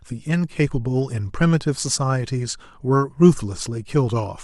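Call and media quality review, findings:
No faults found in the speech audio. Nothing here calls for a ticket against any component in the call or media path.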